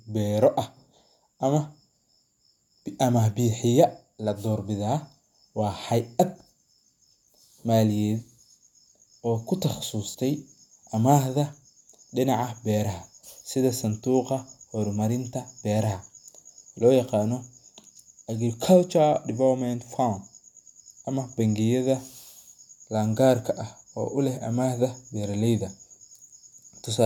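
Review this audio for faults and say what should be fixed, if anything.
Right after "oo ku", from 10.10 to 10.16 s, there's AAC frame loss with concealment: about 43 ms, likely two frames, patched from the previous spectrum, leaving a brief smeared, noisy blip. Adding error protection or retransmission on the stream would stop those frames going missing.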